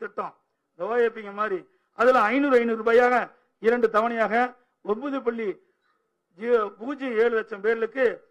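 Nothing is technically wrong with this clip.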